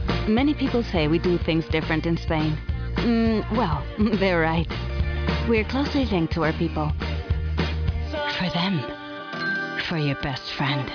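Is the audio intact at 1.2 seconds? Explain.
Yes, the audio is intact at 1.2 seconds, with no fault audible at that moment.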